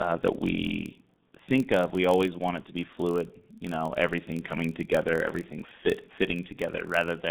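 A speech recording carries two faults from start to finish. The first is G.723.1 codec damage, and it is heavy. Nothing reaches above 4 kHz, and the usable band sits between roughly 150 Hz and 3.7 kHz. The speech sounds muffled and hoarse. Consonants smear together. The codec cuts the audio into 30 ms frames and rebuilds the voice from a model that updates slowly, so fast detail gets lost. The coarse result fits a rate near 6.3 kbit/s. The second fault is a filter restarted on every block. A steady buzz at 43.1 Hz runs under the speech. It grows louder as the speech gets louder. Each block starts from silence, so a small click lands at every block boundary. That repeat rate fits a 1024-sample block.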